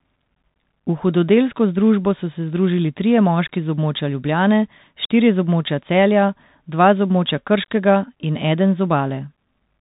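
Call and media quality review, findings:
Bluetooth CVSD headset codec on the link throughout, consistent with 64 kbps delta modulation. Band capped near 4 kHz, slope overload on loud highs, scratchy sibilants, granular hiss under speech.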